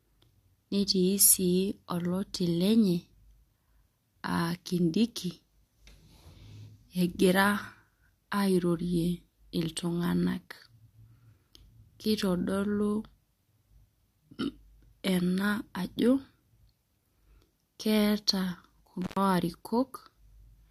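Near the end of the speech, from 19.02 to 19.17 s, there is an intermittent contact: a loose cable or plug briefly loses its connection, so the signal path is broken for about 99 ms before the contact closes again. The speech cuts out abruptly, with a crackle where the contact opens and closes. Between those edges only a faint hiss remains, and then the speech resumes.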